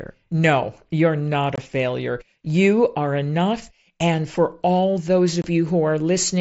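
Unconcealed Bluetooth headset packet loss drops voice packets with nothing filled in, at 1.56 to 1.58 s after "you're not" and 5.42 to 5.44 s after "for all those". Each gap of about 22.5 ms, consistent with three lost frames, is an abrupt-edged silence in the mSBC-coded speech.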